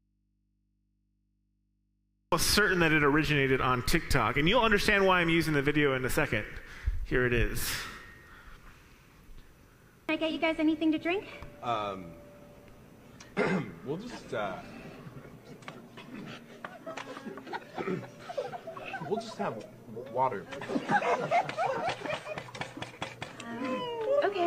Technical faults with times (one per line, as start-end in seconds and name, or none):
0.00-2.32 audio dropout to a faint residue